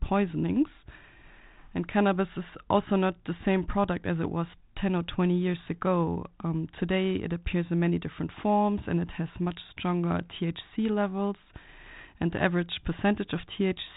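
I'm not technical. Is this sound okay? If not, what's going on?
Yes, nothing stood out as a problem when listening to this recording.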